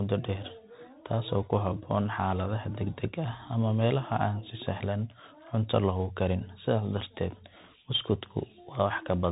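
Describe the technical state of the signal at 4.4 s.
At 4.4 s the speech carries Bluetooth CVSD headset codec damage, present throughout. Nothing passes above 3.8 kHz, fitting a 64 kbps CVSD link. One-bit slope coding leaves scratchy s sounds and granular hiss.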